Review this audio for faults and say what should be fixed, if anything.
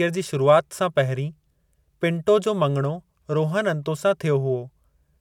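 No faults turned up in this audio, so nothing needs to be fixed.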